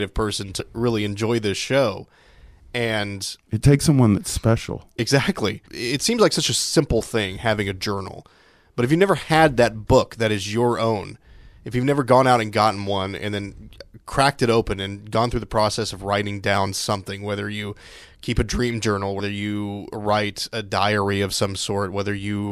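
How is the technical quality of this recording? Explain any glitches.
Three compressed frames skipped glitches interrupt the speech, each a brief smeared blip where the audio jumps forward.

At 0.59 s, just before "really enjoy this show", about a tenth of a second goes missing. At 4.98 s, right after "takes someone that's special", the jump is longer, roughly 200 ms. At 19.19 s, between "keep a dream journal" and "you write a", about 100 ms drops out.

Whole compressed frames were lost or rejected by the decoder. Each gap fits a small whole number of frames of about 26 ms. Overlapping neighbouring frames smear the joins instead of clicking.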